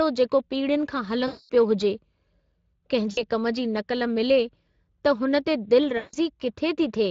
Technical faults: Speex codec; VoIP packet loss concealed by the speech codec

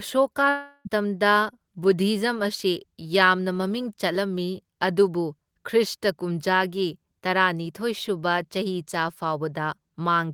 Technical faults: long network dropout

